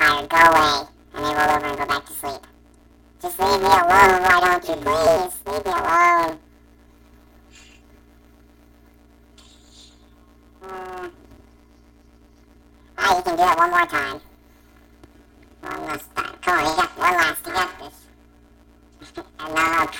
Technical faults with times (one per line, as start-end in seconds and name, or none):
0.00-20.00 planar audio read as interleaved